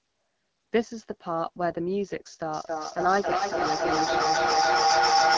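The speech passes through an AMR wideband (HD Voice) codec at a rate that sounds like one of the lowest, around 8.85 kbit/s, so its vocal tract model has too few pulses to follow the voice, and the speech comes out plainly rough and raspy throughout. Nothing sounds above 8 kHz, as expected after the call's microphone processing. From 2.49 s to the end, a feedback howl builds as a second device on the call feeds the loudspeaker back into the microphone, each trip gaining level. It narrows to a tone around 700 Hz, peaking about 7 dB above the speech, and the loop's delay is roughly a third of a second.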